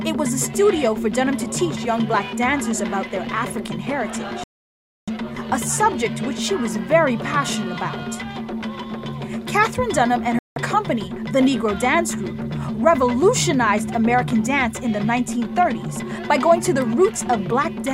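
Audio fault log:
4.44 to 5.09 s and 10.39 to 10.57 s: Bluetooth stall. Playback cuts to silence for about 0.64 s, then 0.17 s, before resuming, likely because interference delayed packets and the headphone buffer ran dry. The waveform shows flat gaps, and the spectrogram shows sharp-edged blank vertical bands.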